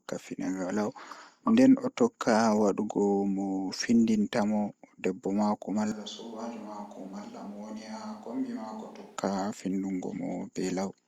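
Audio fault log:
5.92 to 9.17 s, switch to a distant microphone: the speech suddenly goes roomy and hollow, drops about 10 dB, loses its low end, and picks up room noise sitting roughly 30 dB under the speech, then snaps back just as abruptly. The likely cause is the close mic dropping out and the recording falling back to a mic further away, so you hear much more of the room's reflections and far less direct sound.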